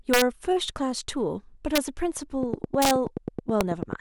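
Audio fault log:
0.14 to 0.22 s, 1.75 to 1.78 s, 2.82 to 2.91 s and 3.61 s: integer overflow, loud peaks pushed about 1 to 4 dB past the ceiling wrap to the opposite sign, giving harsh cracks far nastier than clipping.
2.43 to 3.94 s: train of clicks, a steady tick about 9.3 times a second, around fifteen in all, poking up to roughly 10 dB above the speech, likely from nearby interfering equipment.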